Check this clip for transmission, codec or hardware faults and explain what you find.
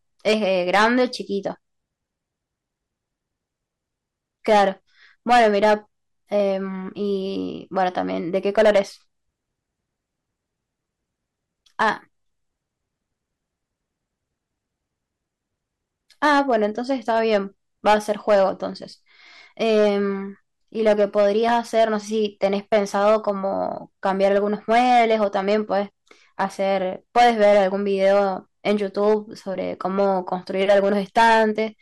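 One fault runs through the whole speech clip: hard clipping. The signal was driven about 11 dB past what a stage could pass, so peaks are sliced flat. With only a couple of percent of samples over the limit, it sounds like harsh crackle on the loudest moments.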